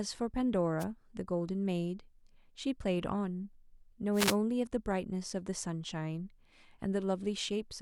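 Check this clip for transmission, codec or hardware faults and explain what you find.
Two short bursts of static cut across the speech, at 0.79 to 0.85 s and again at 4.13 to 4.37 s, the second lasting about 240 ms. These are wireless microphone noise hits: the analogue FM radio link fades as reflected signals cancel the direct one, so receiver noise rises and swamps the audio, heard here as a brief swish of hiss before the signal recovers.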